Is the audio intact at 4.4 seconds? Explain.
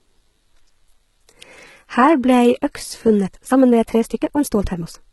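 No. At 4.4 seconds the speech sits inside a time-stretched section that runs from 3.21 s to the end of the clip. Here the pace jumps to about 1.55 times the earlier rate while the pitch stays where it was, so the delivery sounds rushed. That points to a likely cause in stretching software dropping short pieces to shorten the passage. A plain speed-up would also raise the pitch, and this one doesn't.

The same moment also carries low-bitrate audio saved at a high bitrate, a fault present throughout the clip. The artefacts of an earlier, much lower-quality encode are still there. A genuine high-bitrate MP3 would not carry them. It fits a likely cause in a very low-bitrate encode, something like HE-AAC, that was later re-saved as a large MP3. The second encode could not restore the detail the first one had already thrown away.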